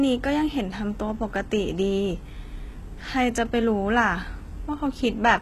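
Throughout the speech, plainly audible HE-AAC compression shapes the treble. Nothing exists above about 12.3 kHz. Upper bands sound copied from lower ones, not captured. Harmonics misalign at the crossover. S sounds turn gritty and lispy. A very low bitrate, around 16 kbps, is the likely cause.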